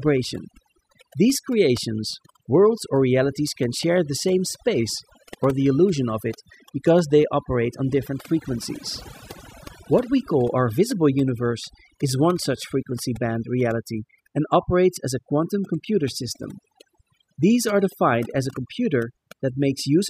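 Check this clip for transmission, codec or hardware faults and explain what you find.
One fault runs through the whole clip: overdone noise removal. A noise reduction stage set far too aggressively is muting any frequency band close to its noise estimate, taking quiet parts of the speech with it. The background drops to near silence sprinkled with twinkling specks. On a spectrogram, the floor between phrases is almost empty except for scattered isolated dots, and the speech harmonics look patchy and ragged at their edges.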